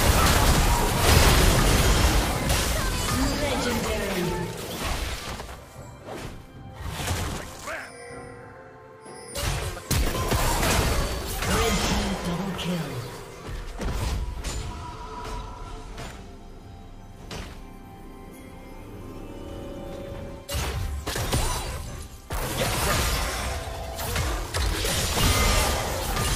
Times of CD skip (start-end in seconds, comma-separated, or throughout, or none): 2.49